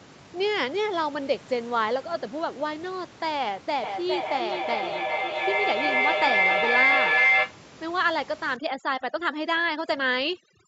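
A shrill tone near 2 kHz rises from 3.83 s to 7.65 s, pulsing about every 400 ms and peaking about 5 dB above the speech. This is a feedback howl: two devices in one room shared the call, and each trip around the microphone-to-loudspeaker loop gained level.

From 8.57 s to the end at 10.68 s, the background drops and breaks up into twinkling specks. That is overdone noise removal: the tool switched off frequency bands near its noise estimate, taking quiet parts of the speech with them.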